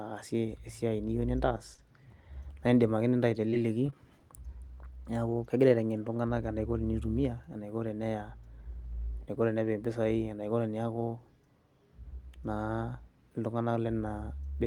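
At 1.74 to 1.80 s there is a short stall from a late packet. A packet arrived late and the jitter buffer ran dry. The receiver held the last sound for about 39 ms. The speech then resumed where it stopped, nothing lost, but about 39 ms later than before.

From 3.50 to 4.22 s comes repeated packet loss, giving a robotic sound. Four separate gaps open in this stretch, the longest 20 ms. Each is patched by stretching the preceding sound, and about 60 ms of speech is missing outright. The result is choppy.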